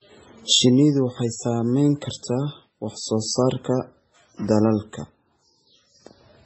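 Transcoding between lossy codecs throughout: nothing above 8 kHz, and coarse smearing beneath a cleaner encoding, likely a low-bitrate MP3 re-encoded as WMA.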